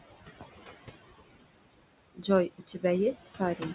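Speech with a steady room noise about 14 dB under it, heard through a call link whose sound stops at 4 kHz, as a narrowband G.711-style codec would. Throughout, the background sinks between phrases and returns under the voice. These are noise suppressor artifacts, with the noise pulled down by about 16 dB. At 2.15 to 2.25 s and 2.49 to 2.84 s, parts of the speech go faint or swallowed, dropping by up to about 19 dB and about 15 dB. This is speech cut by the noise suppressor, which mistook soft speech for noise and turned it down with the background.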